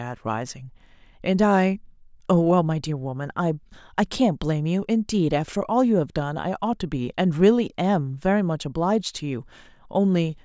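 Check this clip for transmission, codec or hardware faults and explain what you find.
No faults found in this recording.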